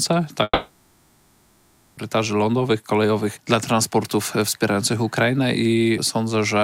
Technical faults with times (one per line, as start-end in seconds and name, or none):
0.43-1.99 long network dropout